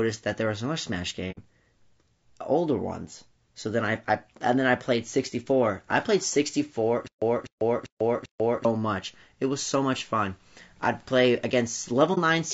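It's a speech clip, and the whole thing has that rough, grainy texture of low-delay AAC compression, likely AAC-ELD at a low rate, something like 32 kbps, with noise between harmonics. At 1.31 s there's AAC frame loss with muting: a soft-edged 60 ms hole, where lost frames were zeroed, and a shorter 30 ms one at 12.14 s. From 7.07 to 8.65 s there's a stutter with silent gaps: a 0.25 s fragment repeats four times, every 0.39 s, with about 0.14 s of dead silence between, likely a stalled stream replaying its last buffer.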